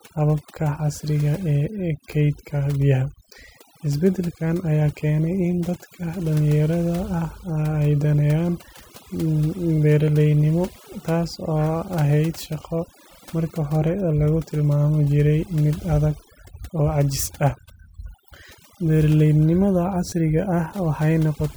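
Across the whole speech clip, overdone noise removal is at work: the noise reduction was set so aggressively that any frequency band sitting close to its noise estimate gets pushed far down or switched off entirely, and the softer parts of the voice are caught along with the noise. The result is a background that drops away and breaks up into small twinkling specks.

At 12.63 s a repeated buffer occurs. Fresh audio failed to arrive on time, so playback replayed the previous block once more. The repeated piece is very short, which fits a 10 ms buffer, so it sounds like a click or tiny buzz rather than a clear stutter, with a hard join and roughly a hundredth of a second of audio lost. From 20.10 to 20.12 s the same fault returns, this time with the block played two extra times, giving a slightly longer buzzy catch and about twice as much missing audio.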